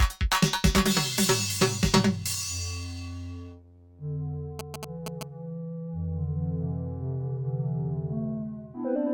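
From 4.59 to 5.23 s, GSM signalling bursts cut through the music: a nearby 2G phone's short radio bursts, rectified by the audio circuit, give a galloping dit-dit-dit of short 217 Hz buzzes, only slightly below the music. A spectrogram shows grouped vertical stripes with harmonic lines, while the waveform shows clustered spiky pulses.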